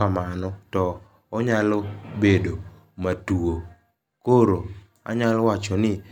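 No technical faults are audible anywhere in the speech.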